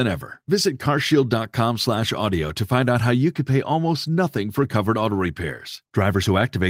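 No technical faults can be heard anywhere in the speech. The recording holds steady throughout, with nothing that interrupts or alters the sound.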